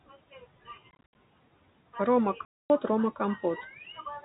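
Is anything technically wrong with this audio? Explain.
Yes, two faults can be heard in this speech clip.

Noise suppressor artifacts run throughout. The suppressor pulls down the bands it treats as steady noise by about 18 dB, deciding frame by frame. The room noise, which sits about 20 dB below the speech, therefore dips in the pauses and swells back under the speech. Unlike codec damage, this pumping follows the gaps between phrases rather than the signal level.

Packet loss filled with silence occurs twice. From 0.91 to 1.15 s, about 150 ms of audio drops out in scattered pieces across a 240 ms stretch, the longest single hole lasting 70 ms. From 2.45 to 2.70 s, one unbroken gap of about 250 ms falls. The hole sizes fit 10 ms packets. The receiver inserts silence, so each hole has hard edges. Concealment would instead bridge the gaps with stretched or repeated sound.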